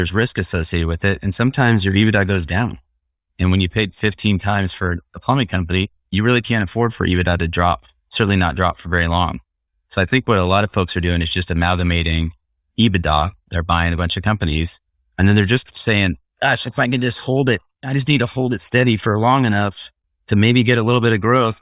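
No technical faults can be heard anywhere in the recording.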